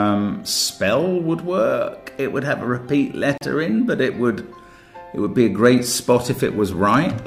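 At 3.38 s the sound drops out for about 36 ms, ending at 3.41 s, with smeared edges before resuming where it left off. This is a gap at a join of encoded pieces: separately encoded sections were butted together untrimmed, leaving encoder delay and end padding as silence.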